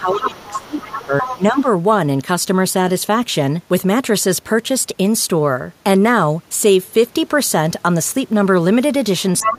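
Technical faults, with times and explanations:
0.00–1.67 s, speech suppressed in double talk: the main talker dips by up to around 20 dB in pieces over roughly one and a half seconds. The echo canceller likely turned everything down while both sides spoke. The waveform shows a gouged, uneven envelope.
0.13–1.42 s and 1.58–1.68 s, other side's voice leaking through: a second voice comes through alongside the talker, about 10 dB below it in the longer stretch and a faint scrap near 1.6 s. Echo from the loudspeaker was likely left in the microphone signal. On the spectrogram this appears as a separate, fainter set of harmonic striations overlapping the talker's.
9.40–9.51 s, other side's voice leaking through: a brief burst of the other voice at roughly the same level as the talker. Uncancelled loudspeaker echo is the likely source. On the spectrogram it shows as competing harmonics of equal strength, and the waveform has a short, dense bump.
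9.43–9.58 s, speech suppressed in double talk: the talker drops by around 20 dB for the last 150 ms, likely because the canceller attenuated both voices during the overlap. The waveform collapses abruptly at the end.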